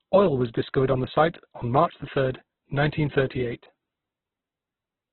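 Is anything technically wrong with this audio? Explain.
Yes. Throughout, the speech sounds grainy and rough with nothing above 4.1 kHz, likely heavy Opus compression at a very low bitrate, which fills starved bands with noise instead of MP3-style swirling holes.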